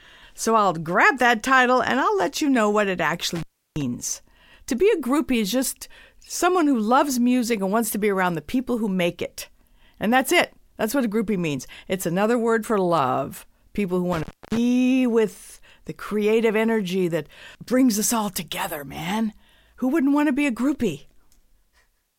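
A speech clip in which the sound drops out or breaks up twice, with crackle at the edges and hiss in the gap: at 3.35 to 3.82 s, right after "you know what it", for about 0.33 s, and at 14.12 to 14.57 s, just before "with the creative energy", for about 0.29 s. This is intermittent contact, a loose cable or plug briefly opening the signal line.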